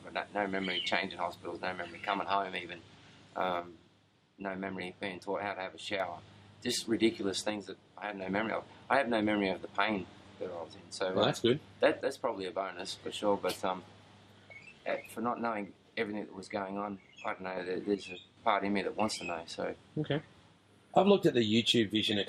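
The level falls abruptly by about 6 dB from 3.60 to 6.00 s, 7.50 to 8.22 s, 12.01 to 12.79 s, 15.17 to 17.57 s and 17.95 to 18.37 s, likely because one channel drops out before the mono sum. Each appears as a flat-edged step down in the waveform and a uniformly dimmer band across the spectrogram.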